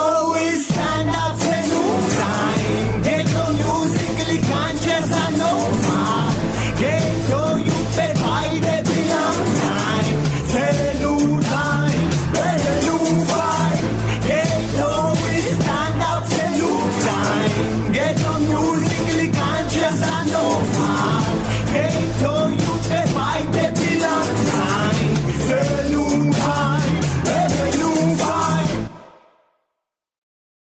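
Gain pumping runs through the whole clip, likely from gain set far too high with a fast limiter or compressor pulling it back on loud moments. The level swings by around 10 dB, squeezing loud and soft parts together. The call path leaves nothing above 8 kHz.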